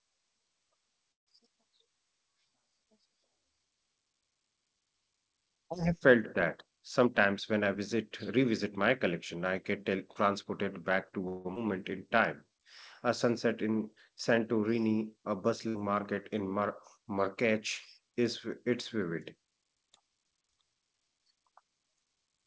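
At 1.12 to 1.29 s a call audio freeze leaves about 0.14 s of near-silence: the last sound is carried on only briefly before dropping out. The likely cause is packets held up and a jitter buffer running empty. Nothing is lost afterwards, and the sound resumes exactly where it stopped, which is what separates it from a packet loss burst.

From 7.04 to 8.78 s a jitter buffer speed-up plays the speech at about 109% speed. Roughly 150 ms is trimmed in pitch-period slices to cut excess delay. The pitch stays the same while the pace hurries, so this is not a skip, which would leave a single audible jump.

A second call audio freeze at 11.28 to 11.47 s behaves differently. The last sound is held as a fading continuation for about 0.16 s instead of falling silent, but again the speech picks up with nothing missing.

Just after, at 11.55 to 11.58 s, a skip ahead removes roughly 70 ms and splices the two sides almost directly. 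The result is an abrupt jump in the speech rather than a held buzz or a gap.

From 11.68 to 13.08 s a jitter buffer slow-down runs the speech at 95% speed, adding 76 ms by repeating pitch periods to rebuild reserve. Sounds are drawn out at unchanged pitch, the opposite of the earlier speed-up, with no single identifiable stutter.

At 14.19 s a repeated buffer plays one 10 ms block twice. The hard join at the repeat is so short that it comes across as a click or brief buzz, not the audible stutter that a longer buffer would produce.

At 15.69 to 15.76 s a burst of packet loss leaves a 58 ms gap filled with a decaying continuation of the last sound, and then resumes about 60 ms further on. Unlike a freeze, that stretch of speech is simply gone.

Throughout, the G.722 call path at 64 kbps leaves nothing above 8 kHz.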